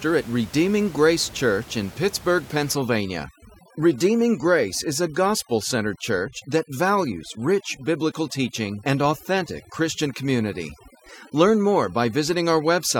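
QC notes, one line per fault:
2.75–12.99 s, overdone noise removal: noise reduction set too strong cuts individual frequency bands whenever they approach its noise estimate. The room noise, about 21 dB below the speech, drops and breaks up into twinkling specks, and quiet parts of the speech go with it.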